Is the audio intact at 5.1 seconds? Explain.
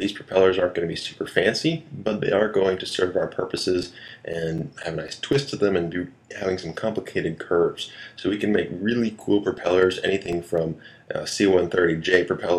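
No, 5.1 s sits inside a run of CD scratch ticks from about 3.58 to 5.33 s. Once per disc revolution, a blemish wipes out more data than error correction can rebuild, so the player patches or mutes the gap. You hear eight short ticks, the longest just a few milliseconds.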